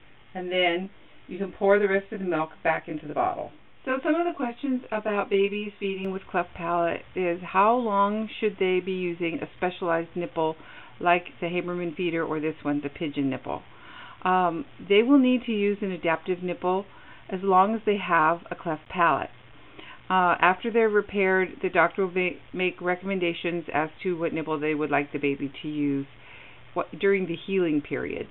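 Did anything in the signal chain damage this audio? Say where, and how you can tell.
Yes. From 0.0 to 6.05 s there is channel delay (comb filtering): one channel runs around 20 ms late before the mono fold-down, which fits a buffer or routing offset. It sounds rough or slightly doubled. A spectrogram shows fixed, evenly spaced notches from around 30 Hz.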